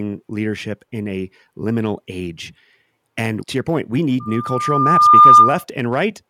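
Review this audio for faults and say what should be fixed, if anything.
Loudspeaker feedback squeal, 4.20 to 5.64 s, after "to your point we": a 1.2 kHz tone swells over about a second to roughly 15 dB above the speech, as the microphone re-amplifies its own loudspeaker with loop gain above one. Lower monitor gain or notch 1.2 kHz to prevent it.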